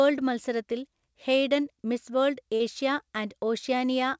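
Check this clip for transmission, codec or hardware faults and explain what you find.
One transmission fault stands out, in a speech clip whose top end stops at 8 kHz, as a wideband call codec such as G.722 would leave it.

From 2.56 to 2.63 s there is a short concealed packet loss. About 40 ms of audio never arrived in time. The receiver filled the gap by extending the preceding sound, using its pitch where it was voiced and shaped noise where not. Then it faded back into real audio. The result is a brief smear or wobble at that point.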